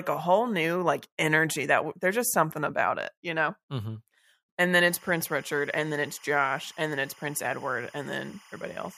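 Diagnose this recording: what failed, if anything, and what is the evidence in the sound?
Timecode bleed through the analogue wiring. From 4.81 s, after "and then", to the end, leaked code warbles near 1 and 2 kHz, about 25 dB down.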